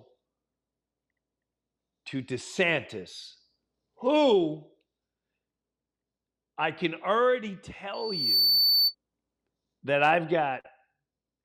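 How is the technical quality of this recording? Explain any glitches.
The recording has one clear glitch, a burst of feedback.

Loudspeaker feedback squeal, from 7.93 s to 8.95 s: the microphone is picking up a loudspeaker it feeds, and at one frequency the loop gain climbs above unity, so that frequency keeps amplifying itself round the loop. Here it is a piercing tone at 4.5 kHz that swells to full strength in under half a second, ending up roughly 5 dB louder than the speech, and lasts about a second before it cuts off.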